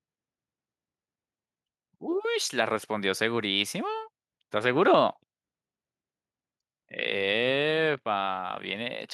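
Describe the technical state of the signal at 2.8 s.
Nothing at 2.8 s points to a technical fault; the speech signal is intact at that moment.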